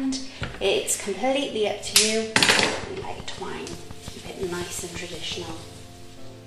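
From 1.97 to 2.63 s, software matching two clocks likely made a drift correction step: to refill or drain its buffer, it changed the playback rate all at once. The audio runs about 6% slow, and pitch falls with it by 107 cents, slightly more than a semitone. The sound seems suddenly detuned downward and sluggish, then snaps back to normal speed and pitch at 2.63 s.

From 2.84 to 5.51 s, a train of clicks appears, likely from an outside source such as interference from nearby equipment or a faulty connection or power supply, injecting a pulse at a steady rate of 5.63 per second. About fifteen clicks of much the same shape arrive at regular spacing. They peak around 5 dB above the surrounding audio, so the ticking sits on top of the sound for nearly three seconds.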